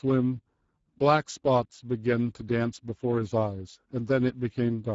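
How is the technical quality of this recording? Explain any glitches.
The quality is noticeably degraded by low-rate codec artefacts across the whole clip. Speex codec compression, throughout: this CELP coder spends too few bits on the excitation signal, so speech sounds plainly noisy and hoarse, consistent with a rate near 10 kbps, and nothing remains above 7.6 kHz.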